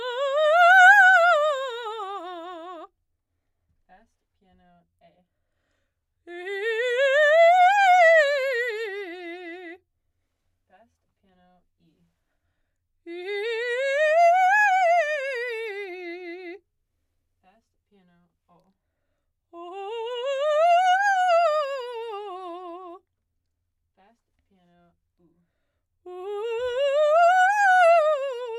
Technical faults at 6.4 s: none

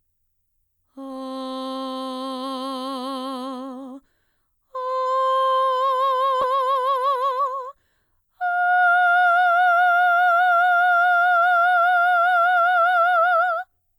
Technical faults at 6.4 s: short concealed packet loss; skip ahead; jitter buffer speed-up

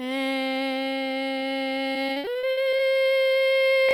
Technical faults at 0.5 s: none

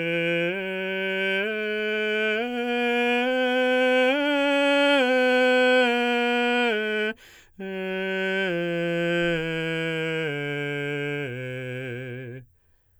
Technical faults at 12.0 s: none

